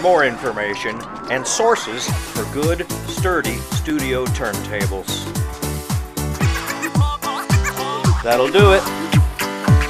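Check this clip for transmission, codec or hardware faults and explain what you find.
One fault is present: clock drift buffer slips. From 1.03 to 9.63 s, a regular click recurs every 1.44 s, roughly seven times. Two clocks likely disagree by about 500 ppm. The buffer between them drifts until a few dozen samples drop or repeat.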